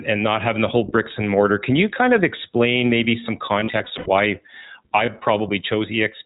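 Throughout, the iLBC codec cuts everything above 4 kHz, leaving an empty band at the top of the spectrogram and a slightly rough, synthetic edge that fits its 15.2 kbps, 20 ms mode. Gain pumping also runs throughout: the level swings by around 5 dB as loud syllables pull the gain down, most likely from excessive gain feeding a fast limiter. The waveform envelope looks flattened. Lost iLBC frames follow "of explain maybe some" from 3.46 to 4.08 s. About 260 ms of dropouts is scattered over 600 ms, with runs up to roughly 70 ms, each heard as a buzzy held vowel. Another 20 ms loss at 5.06 to 5.10 s leaves a brief buzzy blip before the sound recovers immediately.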